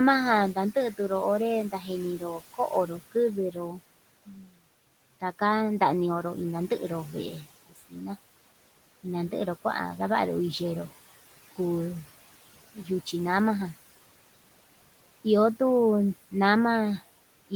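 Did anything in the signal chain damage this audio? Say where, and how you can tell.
Yes. Noise suppressor artifacts run through the whole clip, a call-processing fault. The suppressor pulls the room's steady background, which sits about 19 dB below the speech, down by a further 17 dB or so frame by frame. The residue sinks between phrases and swells under speech.

Speech cut by the noise suppressor occurs at 1.7–1.9 s, 2.18–3.15 s, 4.26–4.62 s, 7.69–8.03 s and 12.74–12.89 s. The same stage mistook soft speech for noise and dropped it by about 12 to 19 dB. Brief stretches, a few tenths of a second each, sound swallowed.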